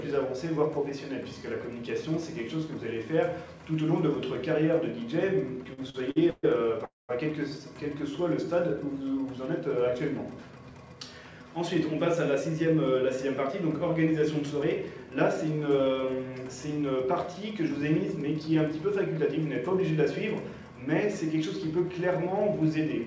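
From 5.64 to 6.45 s the audio stalls over and over. These are repeated stalls, a stutter. Packets kept arriving late, so the jitter buffer ran dry six times. Each time, the receiver stretched the last sound to fill the wait. Together these fills add 292 ms, about 36 percent of that stretch. The longest wait is 132 ms. Nothing is lost, but the sound drags and catches.

At 6.85 s comes a call audio freeze, lasting until 7.11 s. The sound hangs as a fading continuation, then drops to near silence for 170 ms. It then resumes exactly where it stopped. In total 237 ms is inserted, and the delay grows by the same amount. The likely cause is packets held up in transit, draining the buffer.

Two jitter buffer speed-ups follow. From 10.61 to 10.85 s the audio runs at 112 percent speed. From 18.24 to 19.91 s it runs at 105 percent. The buffer had built up extra delay, so the receiver cut out tiny pitch-length pieces, many in a row. 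Around 40 ms goes in the first and around 100 ms in the second. Pitch stays put, but the pace sounds hurried.

Throughout, nothing is heard above 8 kHz, which fits G.722 at 64 kbps.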